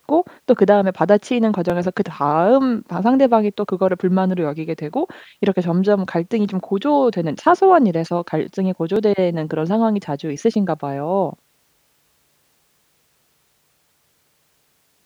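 Two devices in this speech clip's chain are likely running on separate clocks that disagree by something like 700 ppm, so the buffer between them drifts until a block of around 150 samples is dropped or repeated. These clock drift buffer slips sound as regular clicks every 3.64 s, about four of them between 1.70 s and 12.60 s.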